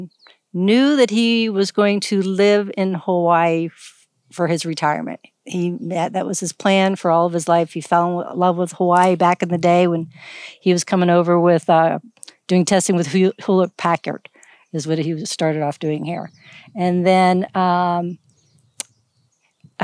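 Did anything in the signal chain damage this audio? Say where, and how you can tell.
No, nothing in the chain audibly damages this speech.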